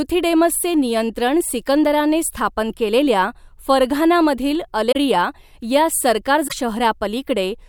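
The likely cause is a broken MP3 bit reservoir: frames went missing, so the next frame reached back for borrowed bits and decoded data belonging to a different frame. The speech jumps forward at 4.91 s, with damage lasting until 4.96 s, and again at 6.47 s, where the damage runs to 6.53 s. Each disturbance spans roughly two to three 24 ms frames before decoding settles.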